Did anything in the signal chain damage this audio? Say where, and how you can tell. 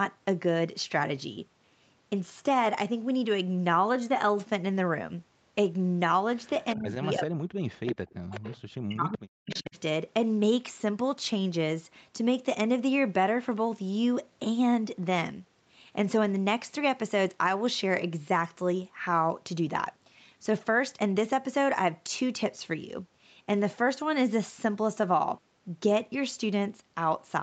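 Yes. Speech suppressed in double talk occurs from 6.76 to 8.3 s and from 8.77 to 9.77 s, with drops of about 40 dB. This is call processing, likely an echo canceller ducking during overlapping talk. The voice dips, loses its high end or cuts out in pieces.

An echo leak appears at 7.86 to 7.92 s, 8.29 to 8.57 s and 9.51 to 9.62 s. Each is a delayed copy of the speech about 15 to 20 dB down, always lagging by 383 ms. That fixed, discrete lag separates it from diffuse room reverb. It is likely residual loudspeaker echo that the canceller missed.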